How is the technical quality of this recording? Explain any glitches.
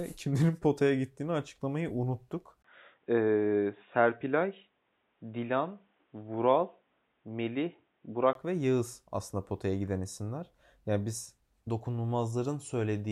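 The recording has one clear glitch, most likely an input switched to a poorer device, from 2.62 s to 8.35 s, right after "potaya gittiğini açıklamayı unuttuk". The likely cause is the system handing recording over to a narrower-band microphone or a headset call profile. Nothing above 3.8 kHz survives, so the speech turns dull and boxy. A brief 20 ms gap marks the switch, a faint new noise floor sits far below the speech, and loudness stays roughly unchanged until full bandwidth returns.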